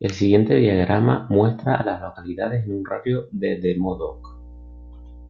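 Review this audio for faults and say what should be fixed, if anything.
Mains hum enters at 3.8 s and runs to the end of the speech: a steady 60 Hz tone with low harmonics, roughly 20 dB below the speech. Power-line current is coupling into the signal path, through a ground loop or a nearby transformer. Prevent it by using a single grounding point, balanced cabling, and keeping signal lines away from power supplies.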